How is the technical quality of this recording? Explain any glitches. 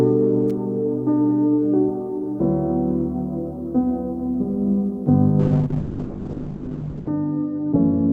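Two glitches stand out. At 0.50 s there's an electrical switching spike: a quick, sharp snap riding on top of the sound. That's likely a nearby switch, motor or static discharge arcing briefly and getting picked up by the audio line.

From 5.41 s to the end you get a call bitrate drop. The encoder's budget fell from 40 kbps to about 6 kbps, and with so few bits it codes coarsely and trims the top end from 20 kHz down to 8 kHz. So it turns rough and muffled, bottoming out for about 1.7 s.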